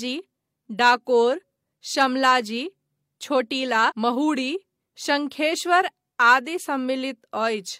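A speech clip with a stream segment skipped at 3.86 to 3.92 s: the sound jumps abruptly ahead with a brief blip. The likely cause is one segment of the stream failing to load so playback resumed at the next. Unlike a dropout, there is no silent gap.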